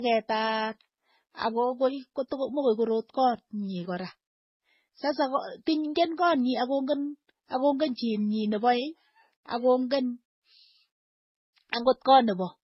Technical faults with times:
0.00-12.64 transcoding between lossy codecs

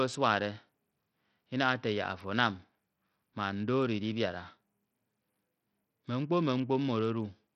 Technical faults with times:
0.00-7.55 Bluetooth SBC compression

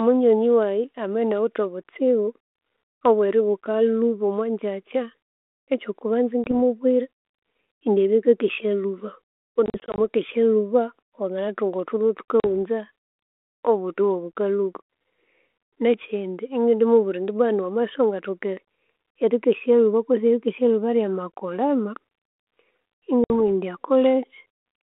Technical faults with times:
6.44-6.52 packet loss on an ADPCM call
9.66-9.98 packet loss on an ADPCM call
12.40-12.45 packet loss on an ADPCM call
23.24-23.31 packet loss on an ADPCM call

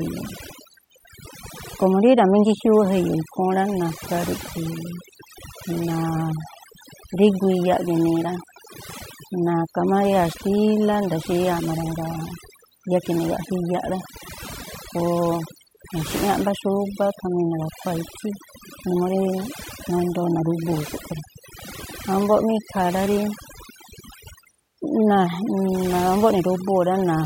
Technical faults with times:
0.00-27.26 overdone noise removal

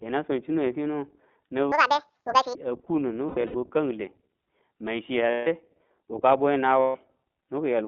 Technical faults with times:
0.00-7.88 iLBC codec
1.72-2.55 section at the wrong speed
3.27-3.57 lost iLBC frames
5.30-5.48 lost iLBC frames
6.81-6.97 lost iLBC frames

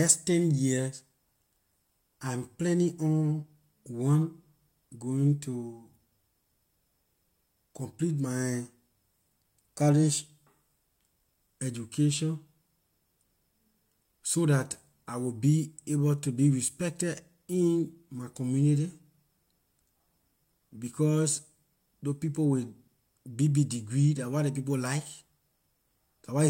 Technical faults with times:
none

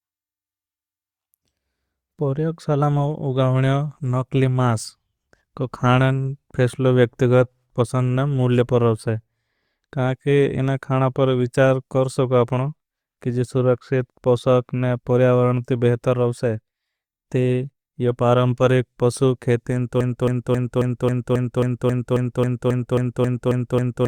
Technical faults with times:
20.01-24.07 broken-record loop

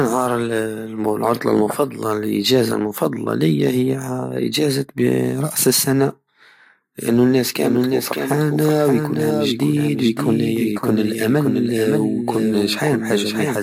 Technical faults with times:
7.55-13.63 doubled audio track

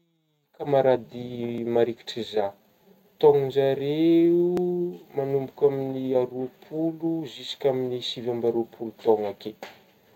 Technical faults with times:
1.58 audio missing between chunks
4.57 audio missing between chunks
7.57 audio missing between chunks

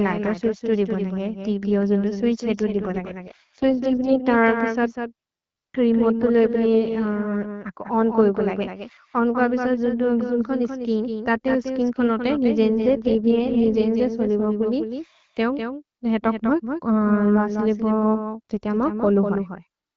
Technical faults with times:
0.00-19.96 doubled audio track
2.57-4.21 AMR rate drop
12.67-13.85 AMR rate drop

